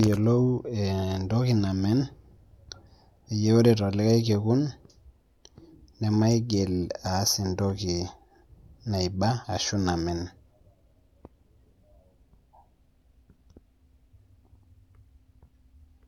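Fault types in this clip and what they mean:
No audible faults anywhere in this recording.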